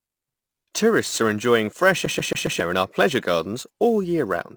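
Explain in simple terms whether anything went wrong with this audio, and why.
Two things went wrong. First, sample clock jitter: the clock timing each sample wobbled by several millionths of a second, so samples landed slightly early or late. That adds a hiss or roughness throughout, growing on loud and bright sounds and vanishing in pauses.

Second, the CD stuck on one turn: after "are enjoying fresh", from 2.06 to 2.60 s, the player kept jumping back to the same spot. The same 137 ms snippet repeats four times, with a brief mute at each jump, before "in our pleasure gardens".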